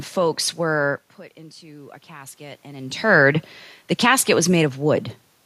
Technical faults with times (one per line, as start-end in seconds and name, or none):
1.60-3.06 automatic gain rising